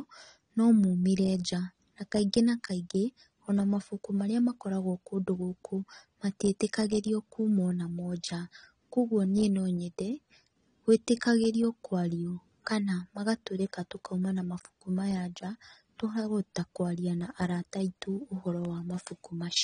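From start to finish the speech carries plainly audible codec damage, likely from AAC compression at a low bitrate, which fits roughly 32 kbps AAC-LC. To save bits the encoder has dropped everything above 9.8 kHz and quantised the remaining spectrum coarsely, so the sound is dull and smeared, with a warbling, fizzy edge on sibilants and held sounds. A spectrogram shows a hard ceiling at 9.8 kHz.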